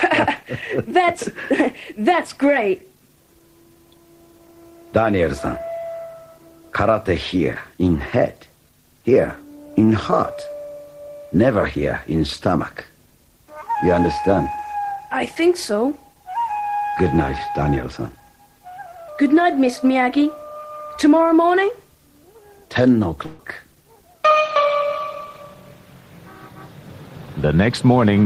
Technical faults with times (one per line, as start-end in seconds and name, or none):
23.26-23.40 burst of packet loss